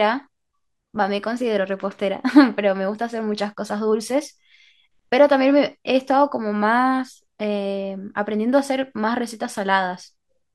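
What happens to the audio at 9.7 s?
Nothing goes wrong at 9.7 s; the speech there carries on intact, with no dropout, click, distortion or other fault.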